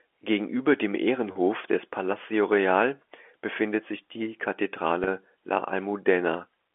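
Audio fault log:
1.32 s and 5.04 s, packet loss with pitch repetition: each time, a brief buzzy, slightly held tone stands in for about 30 ms of sound, which fits a single lost packet. The receiver filled each gap by repeating the last pitch period, over the narrow 300 Hz to 3.4 kHz telephone band.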